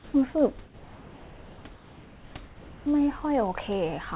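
A speech recording in which one channel runs roughly a tenth of a millisecond late, which fits a delay of a few samples, before the mix to mono, giving channel delay (comb filtering) throughout: a thin, hollow colour with its first notch somewhere around 5 kHz, just above the narrow call band that stops near 4 kHz. Discontinuous transmission likely suppressed the pauses, putting comfort noise in place of the background from 0.00 to 0.14 s, about 2 dB louder, and from 0.64 to 1.64 s, about 1 dB quieter, where the real background gives way to a smooth, featureless hiss.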